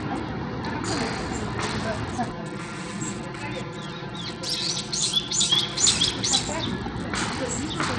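A recording of everyday sound, dull and gritty throughout, with nothing above 12.1 kHz, treble that thins and flickers, and coarse grainy noise clinging to the sound. This is likely Bluetooth SBC compression starved of bits, with damage that points to a low bitrate around 80 kbps. From 2.31 to 5.81 s the sound turns hollow and phasey. That is channel delay comb filtering: one channel arrives about 5 ms late and is summed to mono, cancelling evenly spaced frequencies from around 100 Hz upward.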